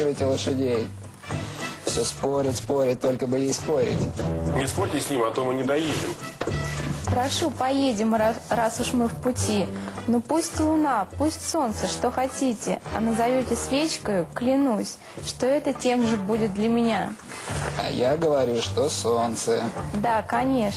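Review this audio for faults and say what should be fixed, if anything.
There's a call bitrate drop from 2.12 s to 7.61 s. The bandwidth estimate sagged, so the encoder got squeezed onto far fewer bits and started coding everything more coarsely. It sounds rough for about 5.4 s, which fits a fall from around 32 kbps to 14 kbps, until things recover. To prevent it, give the link more headroom or tune the congestion control so the estimate doesn't dive that hard on a brief dip.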